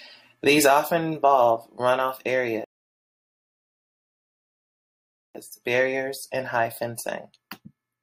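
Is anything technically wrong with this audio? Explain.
Yes. At 2.64 s, right after "often involve run off", the speech drops into a rebuffering stall. The player runs out of downloaded audio and sits silent for about 2.7 seconds until more arrives. At 5.35 s it picks up cleanly at "barriers and high", with nothing lost, just time added.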